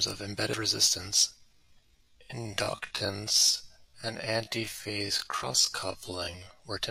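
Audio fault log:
0.53 s, 2.53 s, 5.43 s: dropped buffer (overrun). Each has the sound jumping forward, not pausing. Roughly 70 ms goes missing at 0.53 s and 5.43 s, and a shorter slice of about 20 ms at 2.53 s. The likely cause is samples overwritten before the program read them, leaving the surrounding audio spliced together.
1.35 s to 6.59 s: time-stretched section. The pace abruptly slows to about 0.6 times normal speed while pitch holds steady, giving a drag that starts just before "were attempted to reduce". This likely comes from software lengthening the audio by repeating short fragments to keep the pitch unchanged.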